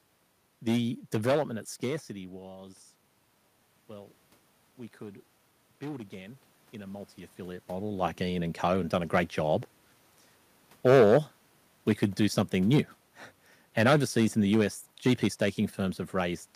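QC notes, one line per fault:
throughout: hard clipping. The signal is driven about 14 dB past what the chain can pass, so roughly 2 percent of samples have their peaks sliced flat, adding high harmonics heard as crackle on loud syllables. The fuzz appears only on peaks, unlike broadband noise.
4.98 to 7.15 s: automatic gain rising. After the input drops about 17 dB, the gain control slowly adds about 3 dB before "model like". Room noise swells along with the voice, which sets this apart from the talker moving around 7.0 s.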